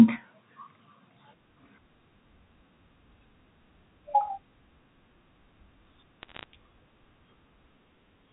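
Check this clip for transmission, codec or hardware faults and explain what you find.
One transmission fault is present. From 6.23 to 6.44 s, bit errors on a digital phone line produce a short burst of crackle. The line carries G.711 mu-law, with nothing above 4 kHz. Flipped bits, at a rate of roughly half a percent, each corrupt one logarithmically coded sample. Errors in the sign or upper bits give sharp ticks that sit over the unchanged speech.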